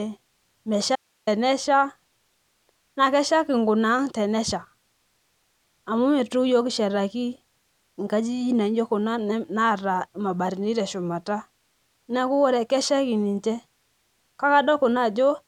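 A likely signal-path break in this speech recording cuts out at 0.96 s until 1.27 s, an audio dropout to a faint residue leaving only hiss, roughly 45 dB down, for about 315 ms.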